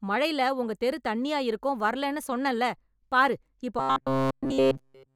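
From 3.79 s to the end of the speech, robotic sound from repeated short buffers takes over. The voice becomes a rigid metallic buzz near 133 Hz. A tiny slice of audio, about 7.5 ms, likely kept repeating as fresh data arrived too slowly.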